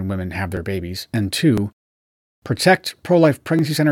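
At 0.57 s, between "women have" and "babies and", then at 1.58 s, 2.58 s and 3.59 s, you get overlapping chunks: every second, about 7 ms replays at the join, giving a regular click-stutter.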